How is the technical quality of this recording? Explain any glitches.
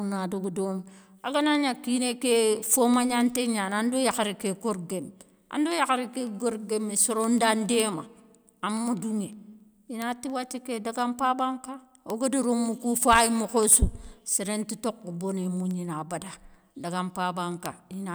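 The recording has one clocking fault. Word clock ticks run from 0.16 to 18.07 s, a steady click roughly every 0.15 s. The receiver's clock drifts about 150 ppm, slipping one sample each time.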